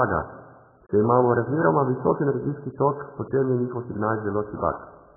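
From start to finish the speech sounds dull and warbly, with nothing above 1.7 kHz, heavy AAC compression damage, likely from a very low bitrate near 8 kbps.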